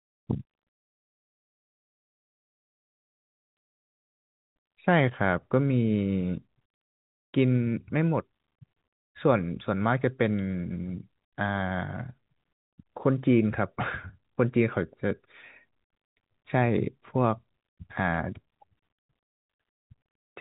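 Speech, with no technical faults to report. It has passed through G.711 telephone coding, so the sound has the narrow telephone band, with nothing heard above about 3.8 kHz.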